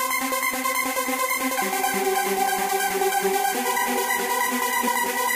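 Twice in this recording of sounds, the decoder skipped compressed frames, either because they were missing from the stream or because it rejected them as corrupt. Each time about four frames of 23.2 ms went unplayed, so the sound jumps forward by roughly a tenth of a second, at 1.06 s and again at 4.87 s.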